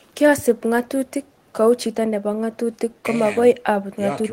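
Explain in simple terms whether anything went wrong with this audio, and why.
Listening through this short speech recording, nothing stood out as having gone wrong.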